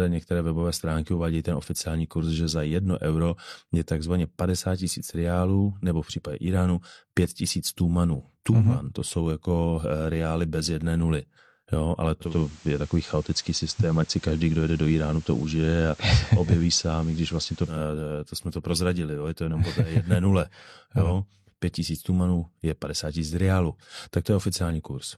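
Digital radio blending to analogue hits this speech clip from 12.20 to 17.83 s. The receiver lost the digital stream and cross-faded over 198 ms to the station's FM broadcast, adding hiss roughly 30 dB down and shifting level by about 3 dB.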